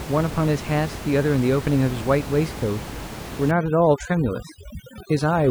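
Speech over room noise about 12 dB below it, until overdone noise removal takes hold from 3.51 s to the end: the background drops and breaks up into twinkling specks. A plain noise gate would cut everything at once, not individual frequency bands.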